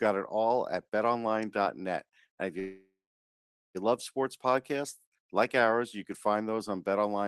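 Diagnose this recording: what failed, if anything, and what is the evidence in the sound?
A call audio freeze from 2.59 to 3.77 s points to the network and jitter buffer. The last sound smears into a fading buzz, then about 0.84 s of silence, before resuming intact at "love sports podcasts like". The likely cause is late packets draining the buffer, adding about 1.15 s of delay.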